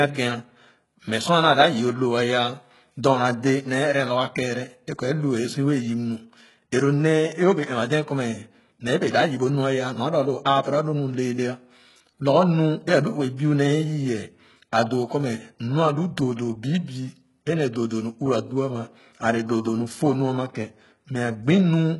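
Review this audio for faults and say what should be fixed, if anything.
Throughout the speech, the treble sounds synthetic. S sounds come out gritty and lispy, and nothing is present above 11.5 kHz. This is likely HE-AAC compression at a very low rate, around 12 kbps. The treble is rebuilt from copied lower bands, so its harmonics do not line up. Encode at a higher bitrate, or use plain AAC, to prevent it.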